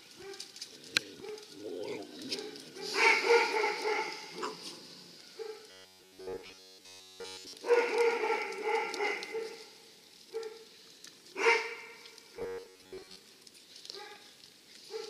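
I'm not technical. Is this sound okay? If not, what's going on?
No. From 5.71 to 7.53 s, and again from 12.37 to 13.16 s, the sound turns into a stiff, metallic buzz stuck at about 94 Hz. This is robotic sound from repeated short buffers. Fresh audio likely arrived too slowly, so the player kept looping a tiny slice of roughly 11 ms. That looping replaces all of the first stretch and most of the second.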